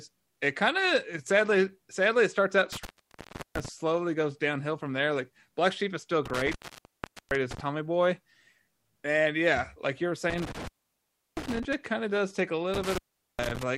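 Speech, cut by intermittent contact four times: 2.72 to 3.68 s after "sadly it starts out", 6.26 to 7.60 s, 10.30 to 11.74 s after "yeah like you were", and 12.74 to 13.63 s. A loose connection opens for roughly 0.4 to 0.8 s each time, crackling at the edges.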